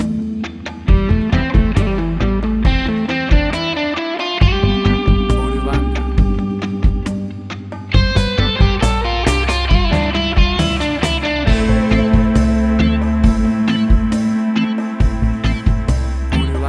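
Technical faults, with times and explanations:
Nothing here stands out as a technical fault, so there's nothing to flag for this one.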